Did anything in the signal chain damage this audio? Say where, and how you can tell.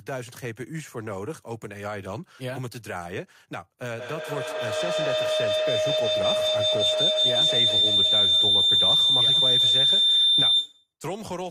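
Yes. A feedback howl runs from 3.85 to 10.93 s. It rises to about 11 dB above the speech and settles near 4 kHz, with a loop delay of roughly 150 ms. Two devices in one room form a loop with gain above unity at that frequency.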